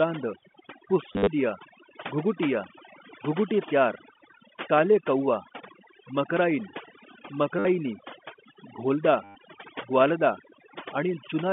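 A noise reduction stage set far too aggressively runs through the whole recording. This is overdone noise removal: frequency bands near its noise estimate are pulled down or switched off, taking quiet parts of the speech with them, so the background falls to near silence with twinkling specks.

Packet loss with last packet repeated occurs three times: scattered over 1.13 to 1.27 s (110 ms lost, longest run 50 ms), 7.59 to 7.65 s (60 ms), and 9.24 to 9.35 s (110 ms). The receiver replays the previous packet, buzzing near 100 Hz, which fits 10 ms packets. Each sounds like a brief robotic stutter within the 200 Hz to 3.5 kHz telephone band.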